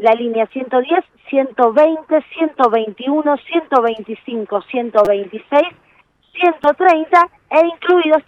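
A repeated buffer occurs at 5.05 s and again at 6.64 s. In both cases new audio arrived late, so playback looped the last block of about 5.8 ms, which fits a 256-sample buffer. At 5.05 s the block plays three extra times, giving a brief buzz with hard joins and skipping roughly 20 ms of sound. At 6.64 s a single repeat produces a short click and drops about 5 ms.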